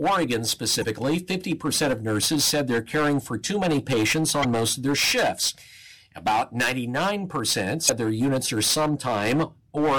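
Hard clipping runs through the whole speech recording. The signal was driven about 18 dB past what the chain could pass. Around a tenth of the samples hit the ceiling and were cut flat. Those flat tops add harmonics high in the spectrum. The result is a harsh fuzz on every loud syllable, not just a crackle on the odd peak.

Damaged data in a compressed stream appears three times, each burst lasting about 44 ms. The first comes at 0.80 s. The second is at 4.40 s, just after "for too many patients" and before "most of their shifts". The third is at 7.85 s, just before "their units are". In each, the decoder misreads corrupted frames, loses sync and hunts for the next frame header. Each is heard as a chirp, squawk, click or short hole breaking into the sound.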